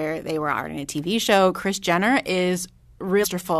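Right near the end, at 3.23 s, there's a quick glitch that's over almost as soon as it starts. That's damaged data in a compressed stream: a stretch of the encoded file got corrupted, with bytes dropped, zeroed or overwritten, so the decoder couldn't make sense of the frame there. It lost its footing, then hunted for the next valid frame header and picked the speech back up.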